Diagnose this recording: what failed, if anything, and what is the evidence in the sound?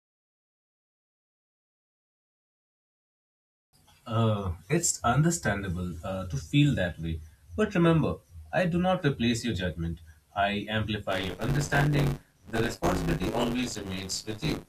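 From 11.11 s to the end, speech carries a robotic 100 Hz rattle. Buffer tearing: writer and reader cross each period, splicing in roughly a third of audio about 20 ms old.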